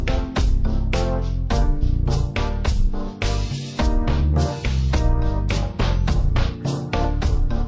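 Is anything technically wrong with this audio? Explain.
Yes, there's a wrong sample rate problem, and it runs the whole way through. It sounds like audio recorded at 32 kHz being played back at 16 kHz with no conversion, so everything runs at half speed and drops a full octave, 12 semitones, giving a slow, heavy, dragged-down sound.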